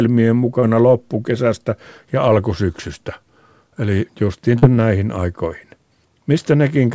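Short concealed packet loss occurs at 0.60 to 0.64 s and again at 4.58 to 4.64 s. About 20 ms and then 40 ms of audio never arrived, and the receiver filled each gap by extending the preceding sound before blending back. The result is a brief smear rather than the silent gap or click of a plain dropout.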